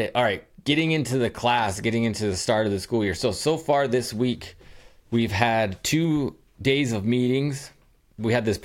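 From 0.79 to 1.60 s, before "getting into the start", rectified GSM signalling bursts gallop as faint 217 Hz buzzes, forming clustered vertical stripes on a spectrogram.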